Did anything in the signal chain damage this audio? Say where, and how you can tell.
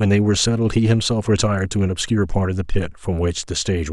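No, nothing in the chain damaged it.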